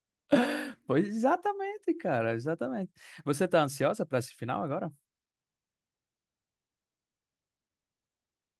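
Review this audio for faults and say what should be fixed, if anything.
No faults turned up in this audio, so nothing needs to be fixed.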